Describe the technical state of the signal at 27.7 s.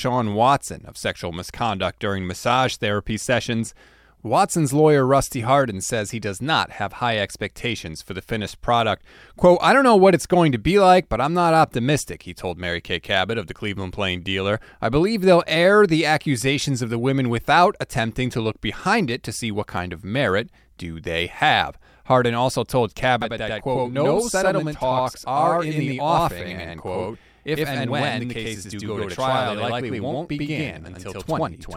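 Each syllable is followed by a second, equally loud copy about 93 ms later, heard as a slap echo or doubling from 23.22 s to 31.76 s. This is channel delay (doubling): one channel runs late, which fits a 4096-sample buffer, and the two are summed to mono.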